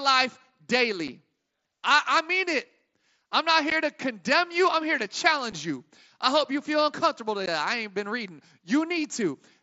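At 1.08, 3.70, 5.52 and 7.46 s there's unconcealed Bluetooth headset packet loss: tiny hard-edged gaps, about 7.5 ms at 1.08 and 5.52 s (one lost packet) and 15 ms at 3.70 and 7.46 s, after "I'm not" and "hope you feel uncomfortable". Nothing fills them, so each one is a brief hole in the speech over the wideband mSBC link.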